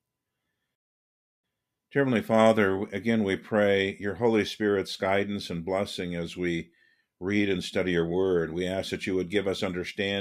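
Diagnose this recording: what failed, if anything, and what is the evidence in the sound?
At 0.75 s the speech drops into dead silence and picks up again at 1.44 s exactly where it left off, with nothing skipped. That gap is a rebuffering stall at the playback stage: the player exhausted its downloaded audio and waited, adding about 0.68 s.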